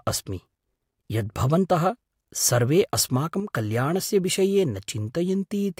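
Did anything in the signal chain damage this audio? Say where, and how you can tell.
Yes, one channel drops out for about a tenth of a second, from 3.40 to 3.50 s, just before "कल्याणस्य विषये". The speech falls by about 6 dB and then snaps back, with no filtering or smearing. That's what a mono fold-down does when one side goes missing: the shared content halves, and anything unique to that side vanishes. The likely culprit is the analogue wiring, say a loose connector briefly losing one leg of the stereo pair.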